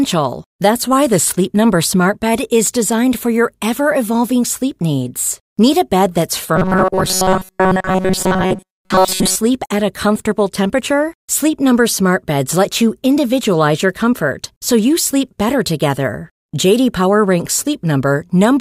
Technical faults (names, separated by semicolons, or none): robotic sound from repeated short buffers